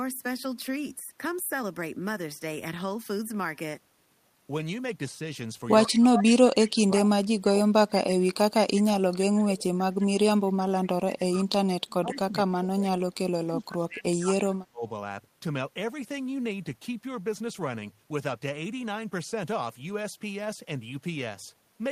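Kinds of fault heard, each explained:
Echo leak: A copy of the speech returns 145 ms late at 5.86, 6.96 and 12.12 s, loud at first, then fainter. A loudspeaker-side echo canceller likely missed it.
Speech suppressed in double talk: From 5.88 to 14.86 s the speech dips in pieces, up to about 30 dB. An echo canceller likely pushed it down during overlapping talk.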